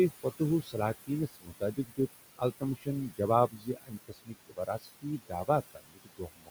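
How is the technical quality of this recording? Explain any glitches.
The recording is damaged by an aggressive noise suppressor. It both pumps the background and eats into the speech.

Noise suppressor artifacts run through the whole clip. The room noise sits about 12 dB below the speech. The suppressor pulls it down by about 17 dB, band by band, frame by frame. So the background sinks in the gaps and swells back under each phrase.

Speech cut by the noise suppressor happens five times: 0.62 to 0.76 s, 1.28 to 1.99 s, 2.6 to 2.88 s, 3.48 to 5.49 s, and 5.71 to 6.5 s. Here the suppressor mistakes quiet parts of the speech for noise and turns them down with it. The drops reach about 15 to 22 dB. Soft consonants and word endings sound swallowed or fade out. The longest stretch, from 3.48 s, loses around a second of material in total.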